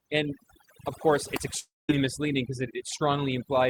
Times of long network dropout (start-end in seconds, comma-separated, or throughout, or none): 1.59-1.91